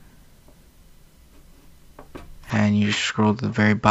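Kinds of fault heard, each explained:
Input switched to a poorer device: from 2.5 s to the end, the sound abruptly loses its top end, with nothing above 7.6 kHz, so it turns duller and boxier with no gap at the change and no clear jump in level. The likely cause is the system moving to a narrower-band microphone or headset profile. On a spectrogram the upper band cuts off sharply at 2.5 s, and a faint new noise floor appears far below the signal, while the waveform envelope stays steady across the switch.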